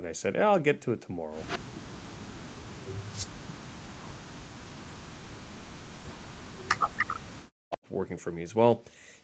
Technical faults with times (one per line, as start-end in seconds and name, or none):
1.47-1.59 echo leak
1.59-1.79 background gated by the echo canceller
2.13-4.19 speech suppressed in double talk
4.58-7.80 speech suppressed in double talk
6.98-7.13 echo leak